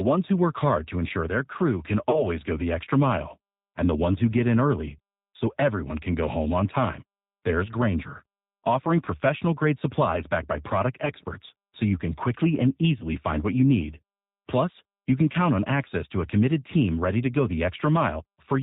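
From start to finish the speech has the rough, slightly synthetic character of the G.729 codec, which fits the 8 kbit/s G.729A variant. The decoder rebuilds each 10 ms frame from a vocal tract filter, a pitch predictor and a few pulses, so nothing above 4 kHz survives. The top end is dull, and the coding damage is plainly audible as a grainy, synthetic texture.

Packet loss concealed by the speech codec breaks in at 2.10 to 2.25 s. The decoder stretches its last pitch and filter state over a gap that fits about three lost frames (30 ms), fading the gain as it goes. This leaves a short smear that fades out, and the voice stays weak while the predictor recovers. The same thing happens more briefly at 9.05 to 9.08 s, which fits a single missing frame, and again at 11.05 to 11.11 s, which fits two. Each time there is a brief blur and a softened onset afterwards.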